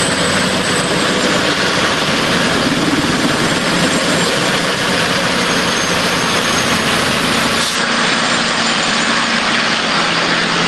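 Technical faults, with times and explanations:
7.75 to 10.67 s, input switched to a poorer device: the sound abruptly turns duller, with nothing above 9.1 kHz and a new background noise about 35 dB below the signal, without a gap or level jump, likely because recording moved to a narrower-band microphone.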